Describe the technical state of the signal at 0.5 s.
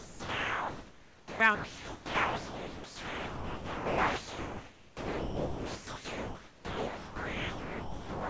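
At 0.5 s the sound is replaced by steady, even comfort noise that runs from the very start to 1.40 s. About 0.78 s of real sound is missing within that span. This is sound dropped by the voice detector. The sender likely judged the quiet opening to be background and stopped transmitting, so the receiver filled the gap with synthetic noise. The real sound returns at 1.40 s. It carries the 8 kHz ceiling of the G.722 call path and room noise about 25 dB below the speech.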